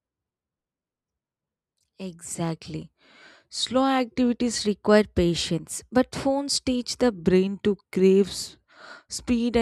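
Drift correction steps at 2.88–4.58 s and 7.12 s to the end: the speech abruptly slows by about 6% and drops about 110 cents, just over a semitone, then snaps back after the first step. This likely comes from clock-matching software retuning playback rate to rebalance its buffer.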